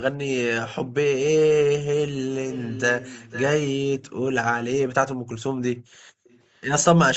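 From 2.51 to 3.45 s a delayed copy of the speech trails the original by about 0.5 s, sitting roughly 15 dB below it. This is echo leak, likely from a far-end loudspeaker whose echo canceller let part of the picked-up signal return down the line. A second, weaker scrap follows at 3.98 to 4.12 s, at the same 0.5 s delay and around 25 dB down, heard as a brief ghost.

From 6.01 to 6.17 s the background is gated by the echo canceller. For about 150 ms the room sound falls away sharply, dropping by as much as about 40 dB, because the canceller clamped the microphone while it judged the loudspeaker active. The ambience then returns when the canceller lets go.

Two last echo fragments follow, at 6.24 to 6.40 s and 6.57 to 6.61 s. Both are still delayed by about 0.5 s but are now very low, roughly 35 and 40 dB under the speech, so they register only as faint residue. All of this is heard within the call's 8 kHz audio bandwidth.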